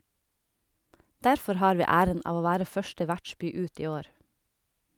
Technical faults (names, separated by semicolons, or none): none